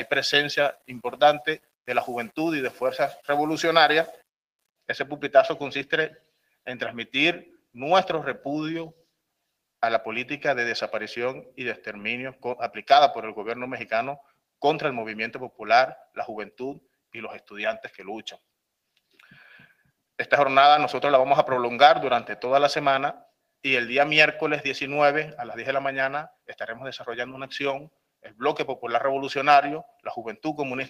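Brief dips in level, about 13 to 18 dB deep, hit the sound at 0.73, 1.57, 6.11, 26.3, 28.22 and 29.86 s, each lasting a fraction of a second. This is sound cut by the noise suppressor, which mistook those passages for noise and pulled them down.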